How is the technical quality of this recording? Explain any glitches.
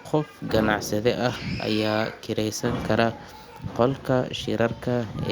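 No glitches turn up anywhere in this speech recording. There is nothing in it that calls for an explanation.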